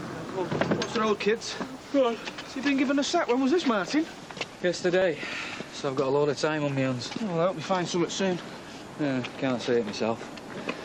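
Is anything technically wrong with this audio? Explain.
Yes. From the start to 4.17 s the audio shows low bit depth with dither. The signal is reduced to a 10-bit resolution, with random dither added before rounding, so the quantisation error becomes steady white noise rather than distortion. It is heard as a constant, even hiss about 45 dB below the signal. On a spectrogram this appears as a flat, uniform noise floor across all frequencies that ends abruptly at 4.17 s, and the waveform's quiet stretches show a fuzzy band instead of a clean line.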